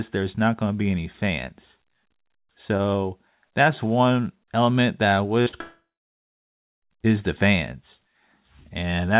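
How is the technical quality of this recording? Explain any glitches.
The recording has a cluster of network glitches just past the five-second mark, heard through a narrowband call path that carries nothing above 4 kHz, which fits a 64 kbps G.711 A-law link.

Right after "one element that I", at 5.42 s and again at 5.48 s, there's short concealed packet loss. About 40 ms went missing each time, and the receiver papered over it by extending the previous sound, so you hear a quick smear or wobble instead of clean speech.

Then from 5.61 s to 6.84 s there's a long network dropout, likely from packets simply not arriving. Roughly 1.2 s of audio is lost. The last sound is stretched briefly, then nearly a second of silence follows before speech returns at "is the fans", with the gap's content gone.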